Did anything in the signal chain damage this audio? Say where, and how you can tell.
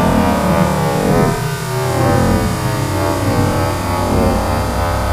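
No, nothing in the signal chain audibly damaged these sounds. Across the whole clip there is nothing to point to at any stage, from capture through to playback.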